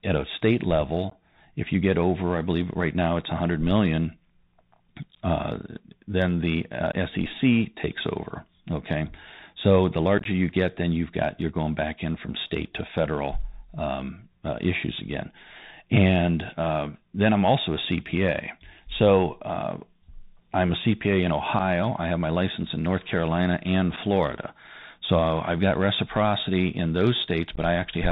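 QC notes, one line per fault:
throughout: Bluetooth CVSD headset codec. Nothing passes above 4 kHz, s sounds turn scratchy, loud high sounds distort as the one-bit delta step fails to keep up, and a steady granular hiss sits under the speech. This fits a 64 kbit/s link. That hiss and slope distortion set it apart from a clean narrowband phone codec.
1.10–1.13, 6.92, 10.18–10.26, 21.59–21.61, 22.63, 23.96, 27.56–27.59: unconcealed Bluetooth headset packet loss. Most are a short hole of about 8 to 15 ms, with abrupt edges and a briefly quieter return on the CVSD link. They come after "uh then the" at 6.92 and before "I have my" at 21.59. At 10.18–10.26, between "so the" and "you get then you've", about 45 ms is lost, scattered over 75 ms, so that stretch sounds chopped. These are isolated holes, unlike the codec's constant hiss.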